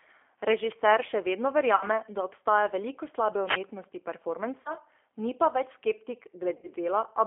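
The whole clip carries G.729 codec damage: speech is held within about 300 Hz to 3.4 kHz and sounds rough and synthetic, which fits an 8 kbit/s model-based coder rather than simple band-limiting. At 1.76–1.84 s, 4.61–4.74 s and 6.57–6.67 s, VoIP packet loss concealed by the speech codec stretches the sound into a fading buzzy tone or coloured noise. Unlike a plain dropout, these are not silent, and each gap fits a few lost 10 ms frames. The wireless microphone noise hit at 3.43–3.61 s is different: a brief swish of static rises over the sound as the radio signal fades, rather than the codec extending the previous sound.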